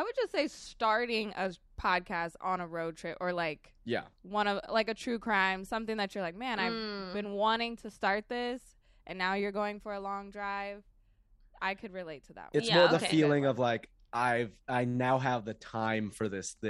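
A speech recording with no audible technical faults anywhere in the signal.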